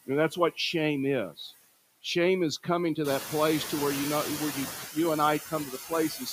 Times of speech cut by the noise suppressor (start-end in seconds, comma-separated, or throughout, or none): 1.36-1.53, 5.46-6.29